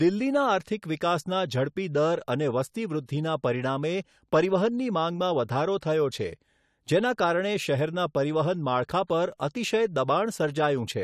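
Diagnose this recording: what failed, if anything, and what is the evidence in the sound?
The codec stage failed. Pre-echo appears in this speech at about 9.07 to 9.10 s. A short hiss arrives roughly 26 ms before a sharp onset, which then sounds smeared. The transform block spread quantisation noise meant for the loud attack into the quiet moment before it.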